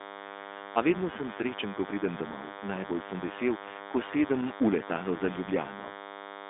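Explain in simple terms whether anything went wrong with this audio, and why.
Two things went wrong, and both last from start to finish.

The first is DECT cordless phone buzz. A nearby cordless phone or its base sends a short radio burst every 10 ms, and the audio circuit picks it up, so a thin, steady 100 Hz buzz sits fairly loudly under the speech. Mains hum is smoother and lower, while this sounds harsh and rasping.

The second is the iLBC codec, a phone-line voice compressor that handles the sound in 20 ms chunks. Nothing above about 3.6 kHz or below 250 Hz gets through, so the speech is narrow and boxy. It also sounds plainly rough and slightly synthetic, which a simple treble cut alone would not cause.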